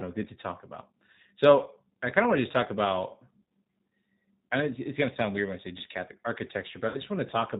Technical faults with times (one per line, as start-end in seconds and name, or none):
0.00-7.60 G.729 codec
6.88-7.01 VoIP packet loss concealed by the speech codec